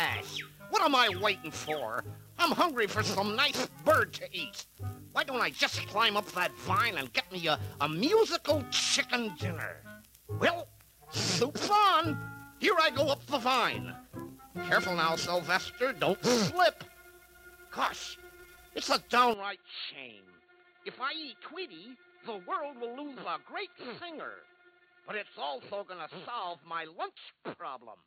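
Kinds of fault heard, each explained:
Input switched to a poorer device: from 19.3 s the sound turns dull and quieter, with nothing above 4.4 kHz, likely from the input changing to a narrower-band microphone.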